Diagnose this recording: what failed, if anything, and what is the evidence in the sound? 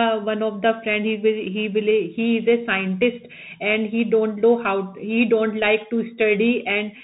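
Codec stage: the Bluetooth CVSD headset codec, throughout. Nothing passes above 4 kHz. S sounds turn scratchy, loud bright moments distort, and granular hiss sits beneath the speech. A one-bit, step-adapting coder is running out of slope. This fits a 64 kbps CVSD link.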